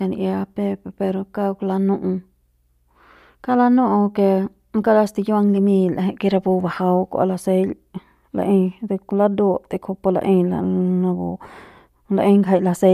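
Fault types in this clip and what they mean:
No technical faults can be heard in this speech clip. There is nothing here to list.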